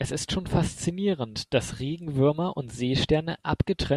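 No audible technical faults occur anywhere in this recording.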